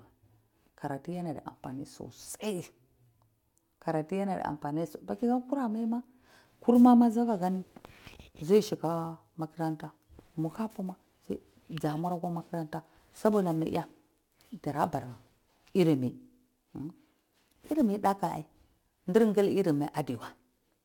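Sample clock jitter from 7.42 s to the end: an unstable converter clock mistimes samples by roughly ten microseconds, adding roughness about 25 dB below the speech, strongest on loud, bright sounds.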